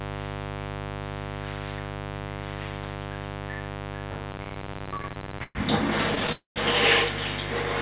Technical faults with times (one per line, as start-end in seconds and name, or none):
0.00-7.81 mains buzz
4.32-5.57 repeated stalls (stutter)
6.32-6.58 call audio freeze